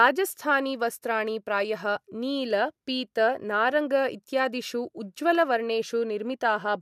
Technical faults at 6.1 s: none

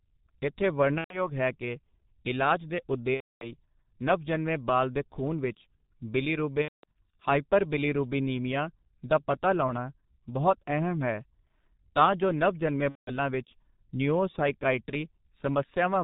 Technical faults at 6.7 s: G.723.1 codec; VoIP packet loss concealed by the speech codec

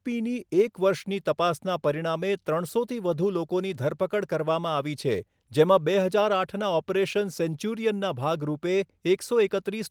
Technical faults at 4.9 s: none

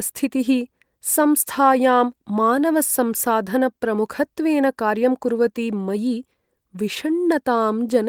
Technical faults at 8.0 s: none

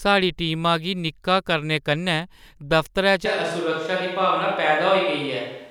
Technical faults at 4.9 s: switch to a distant microphone

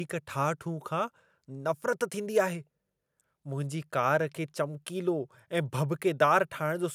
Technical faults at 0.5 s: none

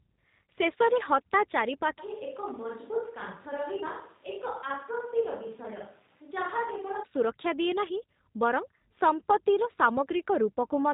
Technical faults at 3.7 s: G.729 codec; switch to a distant microphone

